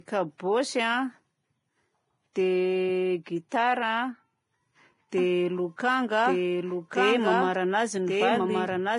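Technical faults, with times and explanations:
Throughout: Vorbis compression. Nothing survives above 10.6 kHz, and what's left in the treble has the hissy, grainy quality of detail that's been quantised so coarsely it turns into noise of roughly the same energy. Tones come out roughened and attacks blurred. The codec damage is heavy, which fits a low bitrate around 28 kbps. Vorbis is the likely culprit: it codes a smooth spectral floor with a crude residue on top, and at that quality it drops the cut-off and starves the treble.
0.38 to 0.40 s and 3.49 to 3.52 s: pre-echo. In both spots a short burst of hiss arrives just ahead of a sharp attack, spreading about 20 ms before the first and about 29 ms before the second. The attacks themselves sound softened and smeared. This happens because a transform codec spreads its quantisation noise evenly across a whole block. When a loud onset lands late in that block, the noise budgeted for the loud part also fills the quiet moment before it.
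5.18 s to the end: doubled audio track. A second full-band copy of the audio cuts in abruptly at 5.18 s and runs to the end. It trails the original by about a second and sits at about the same level. There's no decay or room colour on it, so it isn't reverb. It's most likely a second capture through a slower path, or an edit that left two copies out of step.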